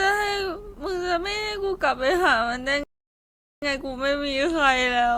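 At 2.84 s the speech halts in a rebuffering stall: the player exhausted its downloaded audio and waited for more data, leaving silence until 3.62 s and stretching the clip by about 0.79 s. What separates this from a dropout or packet loss is that no sound goes missing. The speech picks up at exactly the point where it froze, so the gap is inserted time rather than a hole cut into the audio.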